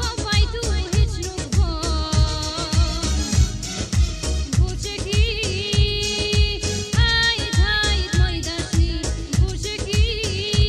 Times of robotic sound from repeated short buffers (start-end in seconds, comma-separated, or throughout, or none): none